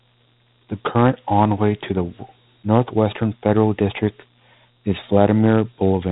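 A speech recording run through Dialogic VOX ADPCM, the 4-bit OKI codec of phone systems, across the whole clip, which fits a 32 kbps stream. Nothing survives above about 3.8 kHz, leaving the sound narrow and muffled, and a plainly audible gritty hiss rides along with the speech.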